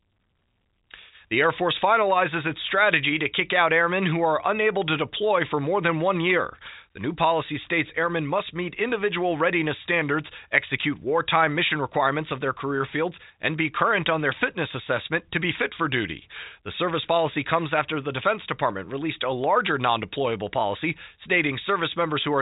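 Nothing stood out on listening to this speech, which comes through the narrow band of an ordinary telephone line.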